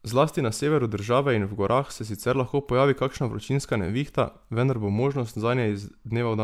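Generation loss runs through the whole recording, from the first syllable to the last. The speech sounds swirly and hollow, with a smeared, watery texture in the upper range and consonant attacks that blur rather than snap. This most likely comes from repeated lossy coding, with the audio decoded and re-encoded around four times as MP3 at a rate that fits 128 kbit/s. Each pass requantises on a shifted frame grid, so the noise and spectral gaps pile up.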